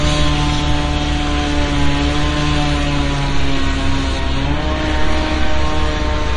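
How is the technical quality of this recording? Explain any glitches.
The technical quality is poor, with two faults.

Throughout the clip, the audio shows plainly audible damage from lossy coding. Nothing is present above 10.6 kHz, so the top end is sharply cut off. The cause is likely MP3 compression at a low bitrate; the damage fits something around 40 kbps. With too few bits, the encoder discards the treble above a fixed point. It also drops weaker frequency detail that flickers in and out between frames. That gives the sound a watery, swirly texture and smeared edges.

From 4.19 s to the end, at 6.37 s, de-emphasis was applied wrongly. A treble cut meant to reverse a pre-emphasis boost was applied either where no boost existed or a second time. The response tilts smoothly downward with rising frequency. At 10 kHz it sits about 8 dB below the level at 1 kHz. The last two seconds sound duller and more muffled than what comes before.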